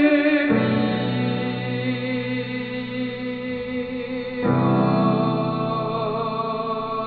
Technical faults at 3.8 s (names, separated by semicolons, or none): none